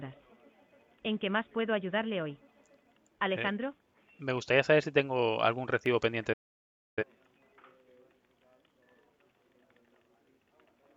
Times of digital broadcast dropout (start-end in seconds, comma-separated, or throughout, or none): 6.33-7.03